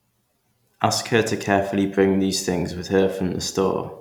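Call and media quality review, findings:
No faults found in this speech recording.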